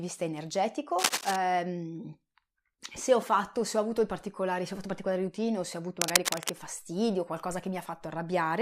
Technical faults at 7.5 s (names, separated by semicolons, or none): none